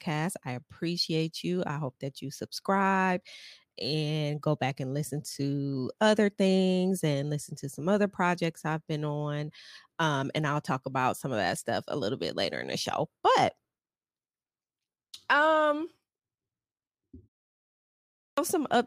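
Speech recording with a clipped start after a pause at 18.23 s: following a 1.03 s silence, the output device wakes late and swallows about 145 ms, so the waveform jumps abruptly from flat into speech and the spectrogram lacks the onset energy through 18.38 s.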